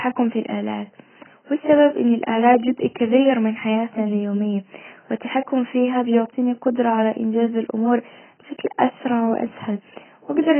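AAC compression, throughout: nothing remains above 3.1 kHz, so the speech sounds heavily dulled and smeared, likely AAC-LC starved at a bitrate near 12 kbps.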